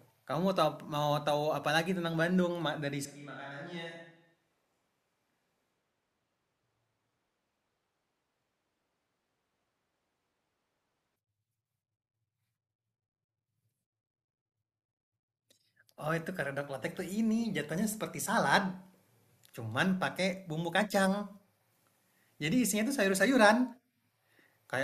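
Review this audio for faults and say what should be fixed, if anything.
From 3.05 to 11.16 s the speech abruptly turns hollow, roomy and bass-light, about 10 dB quieter, likely from a switch to a distant microphone. To prevent it, monitor and back up the close microphone's feed so a failed or dropped channel is caught before the distant one takes over.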